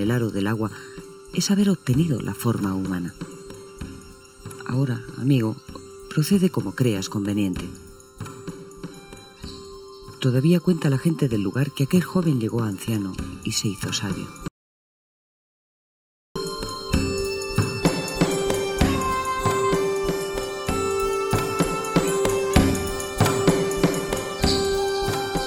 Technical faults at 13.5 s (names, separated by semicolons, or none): channel delay (comb filtering)